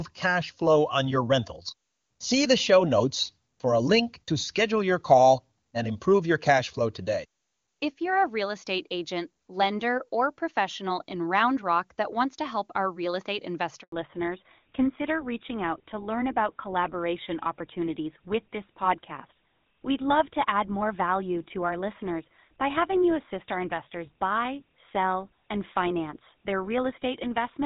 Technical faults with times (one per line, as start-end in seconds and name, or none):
13.82-13.92 handover gap
13.92-27.66 fallback to narrowband